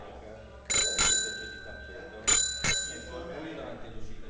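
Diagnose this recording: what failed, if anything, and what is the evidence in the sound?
Nothing failed; the call path behaves as expected.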